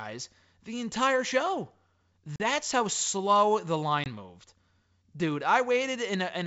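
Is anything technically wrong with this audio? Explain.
Yes. There is packet loss on an ADPCM call, twice: about 40 ms (roughly two packets) lost at 2.36–2.40 s, and about 20 ms (around one packet) at 4.04–4.08 s. Each gap is filled with silence, so the waveform drops abruptly to silence and the spectrogram shows a clean vertical band blank across all frequencies. When speech resumes, the decoder's adaptive predictor and step size no longer match the sender's. The audio comes back with brief, slight distortion right after the hole, before it settles within some tens of milliseconds. The underlying G.722 wideband coding at 64 kbit/s is not at fault.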